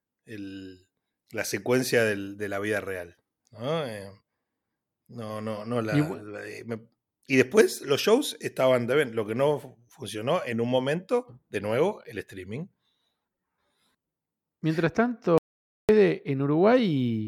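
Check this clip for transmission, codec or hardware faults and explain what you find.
There is one fault, an audio dropout to silence from 15.38 to 15.89 s. The input feed was likely lost briefly while the recorder kept writing zeros, so the speech cuts off abruptly into dead digital silence with no room tone, and about 0.51 s of speech is gone.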